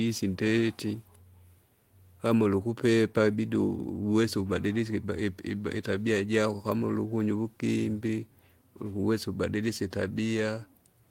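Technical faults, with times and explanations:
Nothing stood out as a technical problem when listening to this speech recording.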